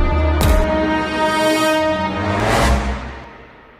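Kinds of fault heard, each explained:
Dropped buffer (overrun): the sound skips forward three times, at 0.64, 2.4 and 3.24 s, losing roughly 70, 40 and 70 ms. Each skip is a jump in the sound with no silence. The likely cause is the capture side reading its buffer too late, after the hardware had already overwritten it, so the two remaining edges are joined directly. On a waveform each skip is a sharp step in the trace. A spectrogram shows a thin vertical broadband line where the content suddenly changes.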